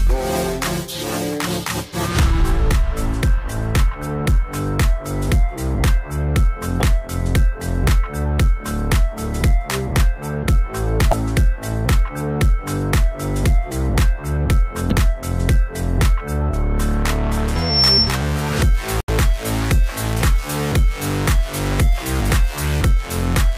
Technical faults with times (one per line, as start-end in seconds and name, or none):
6.78-6.83 damaged data in a compressed stream
11.09-11.13 damaged data in a compressed stream
14.88-14.93 damaged data in a compressed stream
17.55-18.18 loudspeaker feedback squeal
18.98-19.09 damaged data in a compressed stream